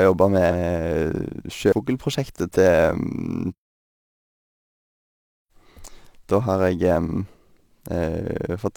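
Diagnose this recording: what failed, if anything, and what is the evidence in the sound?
The converter failed with sample clock jitter throughout the speech. An unsteady clock, wobbling by several microseconds, samples each point slightly early or late. Steep waveform slopes turn that timing error into a hiss, roughly 35 dB below the signal. The roughness follows loud, bright sounds and disappears in pauses.

The compressed stream also carries damaged data, at 0.47 to 0.52 s and 1.68 to 1.74 s. Each spot gives a short glitch lasting about 50 to 64 ms. There the decoder misread corrupted frames and had to resynchronise on the next frame header.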